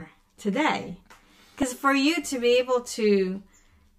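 Speech runs throughout with channel delay (comb filtering): one side lags by roughly 10 ms, so the mono sum hollows the sound with fixed notches from about 50 Hz upward, unlike a sweeping phaser. At 1.62 s, just before "for you to be", compressed frames are skipped, dropping a few milliseconds of audio.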